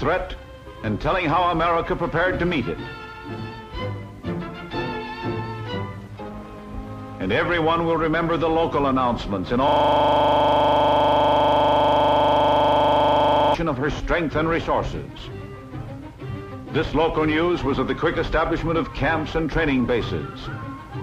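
From 9.68 to 13.54 s, a system hang loop takes over. The machine has frozen while the sound hardware keeps replaying its buffer. One 40 ms slice repeats about a hundred times. At 25 repeats per second, it sounds like a harsh, rattling buzz.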